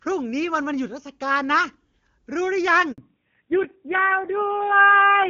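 At 2.92 s a handover gap silences the speech for 60 ms, until 2.98 s, as the call switches networks and no frames arrive. From 2.98 s onward, fallback to narrowband removes everything above 4 kHz, so the speech sounds duller and rougher than the clear HD Voice before it, which points to a low-rate narrowband codec replacing AMR-WB.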